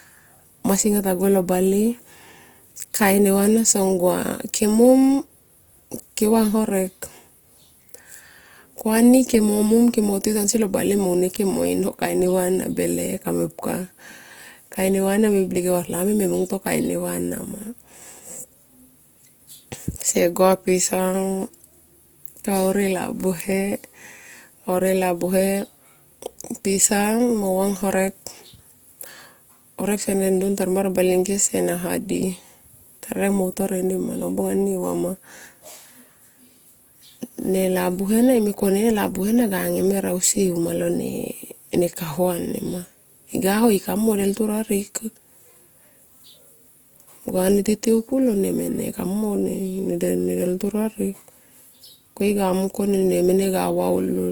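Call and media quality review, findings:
Grainy, rough speech throughout the clip, plainly audible. Likely Opus compression in music (CELT) mode. Band energies preserved, but starved bands filled by folded or noise content, so less swirl than MP3, more texture loss. Fits roughly 24 kbps. Spectrogram: full bandwidth, content up to 20.2 kHz, few holes, smeared noisy fill replacing harmonic detail in upper bands.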